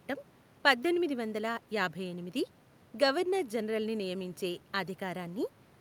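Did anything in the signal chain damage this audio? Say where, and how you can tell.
No signal-chain damage heard.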